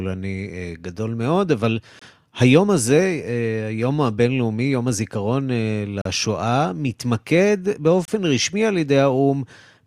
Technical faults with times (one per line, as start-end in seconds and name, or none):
1.99-2.02 gap between stream segments
6.01-6.05 gap between stream segments
8.05-8.08 gap between stream segments